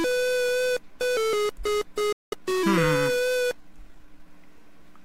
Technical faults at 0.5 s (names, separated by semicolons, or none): none